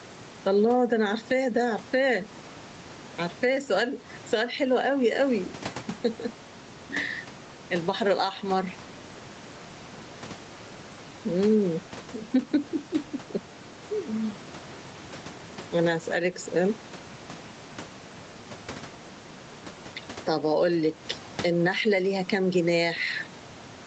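Gain pumping runs right through the speech from start to finish. The room tone sits about 28 dB under the talker, and the level lurches by something like ten decibels. The likely cause is input gain set way too hot, with a fast limiter or compressor clamping down on each loud syllable, so everything sounds squashed.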